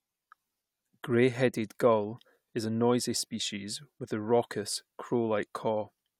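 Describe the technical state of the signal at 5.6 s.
At 5.6 s the speech signal is intact, with no fault present at that moment.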